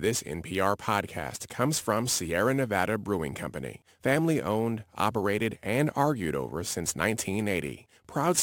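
Throughout the recording, the sample rate has been converted with no anti-aliasing or reconstruction filter, with samples simply repeated to fill the gaps. The residue fits a step up from 32 kHz to 44.1 kHz. This crude rate conversion leaves a regular error sitting roughly 20 dB below the speech, producing tones unrelated to the voice. It is heard as a gritty, inharmonic fizz that rides on louder syllables and bright consonants.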